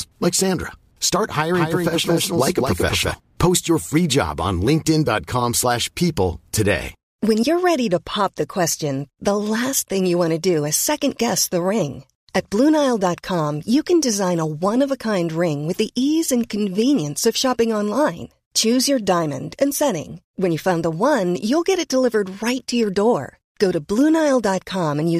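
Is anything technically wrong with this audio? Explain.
Yes. From 1.54 to 3.14 s there's a doubled audio track: the speech gets a second full-band copy roughly a fifth of a second late and about 5 dB down, likely from the signal being captured again through a slower path. It's a dry, flammy repeat that cuts in and out abruptly.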